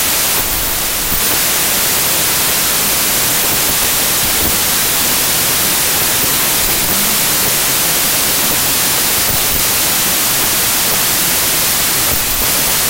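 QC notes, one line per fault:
Throughout: wrong sample width. The speech sits buried under loud, harsh broadband noise, running about 1.33 times too fast and high in pitch. Samples packed as 24-bit integers are being read as 32-bit ones, so each value mixes bytes from neighbouring samples and only some carry the real top bits. Four stored samples feed every three read values, hence the speed-up. A spectrogram shows dense noise filling all frequencies with faint, upward-shifted speech bands.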